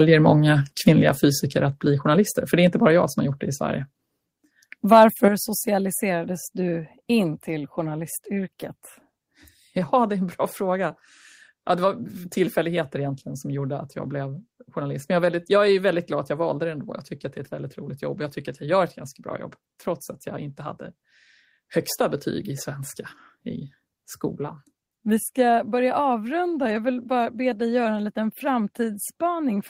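From 4.92 to 5.25 s, the loudest syllables turn harsh and crackly. This is microphone overload. The peaks likely drove the input past the converter's ceiling, by about 2 dB. Their tops were sheared flat. Only a small fraction of the waveform is affected, around 2 percent. Still, the flattened peaks add a gritty, buzzing edge. It clings to the strongest moments of the speech. The distortion stops just before "socialiserades du in till".

At 5.28 s, the whole signal drops at once, by about 7 dB. The speech and the background both fall together. This is the microphone volume stepped down. The call software likely reacted to the overload just before. It cut the device's input level in a single jump rather than a smooth fade. The quieter level begins right as "socialiserades du in till" starts. It stays down from there.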